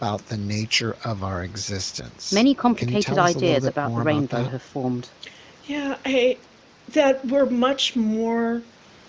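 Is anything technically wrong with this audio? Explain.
No, nothing stood out as technically wrong on listening to this speech.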